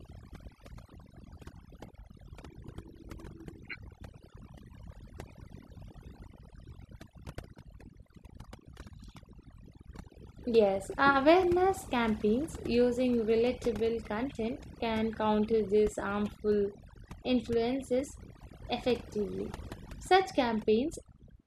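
From start to finish the speech carries overdone noise removal: reduction set far too hard strips individual frequency bands, taking quiet speech detail with the noise. Unlike a plain noise gate, the background sparkles with twinkling specks instead of cutting cleanly.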